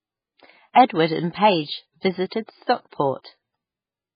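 Throughout the speech, the treble stops dead at about 5 kHz and the remaining sound is watery and swirly, with weak detail flickering in and out. That points to heavy MP3 compression, likely at a very low bitrate of around 16 kbps. The fixed ceiling and the unstable texture set it apart from simple low-pass filtering.

Pre-echo appears at 0.88 s, from 2.29 to 2.32 s, from 2.90 to 2.92 s, and at 3.23 s. In each case a brief hiss of 16 to 27 ms arrives just before a sharp onset. Unlike reverb or echo, the noise comes ahead of the attack rather than after it.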